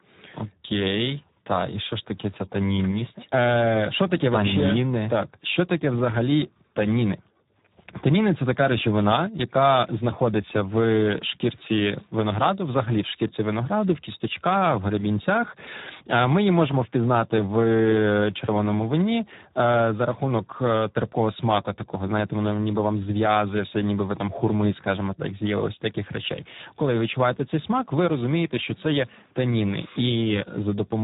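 From start to finish the speech carries Speex codec damage. The damage is heavy. The CELP coder has too few bits for the excitation, so the speech sounds hoarse and noisy. Nothing remains above 3.8 kHz. This points to a low setting near 8 kbps.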